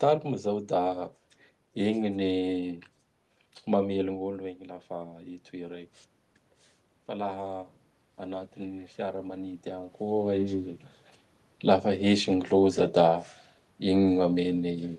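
A speech recording that's come through a call path, with the top end stopping around 12 kHz, which fits an Opus-type codec. From 7.08 s to 10.86 s there's automatic gain rising: the input level drops by about 11 dB, so the AGC gradually lifts its gain by about 4 dB, and the voice and room noise swell up together over those few seconds.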